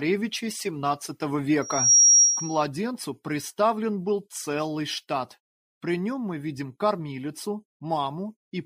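At 1.62 s a loudspeaker feedback squeal starts: a microphone is hearing its own loudspeaker, and the loop gain exceeds one at 5.7 kHz. That tone swells over about a third of a second to roughly 10 dB above the sound and holds until 2.66 s.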